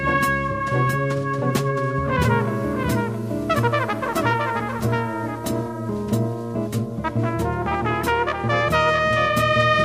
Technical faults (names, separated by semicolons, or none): doubled audio track